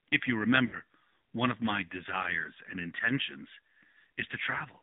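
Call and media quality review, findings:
AMR narrowband mobile codec, throughout: muffled, boxy speech with nothing above 3.7 kHz or below 150 Hz, plus a plainly audible buzzy, synthetic edge. Cause: AMR-NB coding on a mobile leg. The pulse-driven vocal-tract model is starved of bits, with the coarseness suggesting a low mode around 7.4 kbps.

Lost AMR speech frames, 0.66 to 0.76 s: brief smeared, drawn-out patch of about 60 ms that sags in level, then speech resumes rough for a moment. Cause: AMR decoder concealment after failed frames, consistent with about three 20 ms frames lost to radio errors. The decoder repeated the last good pitch and spectral settings with decaying gain.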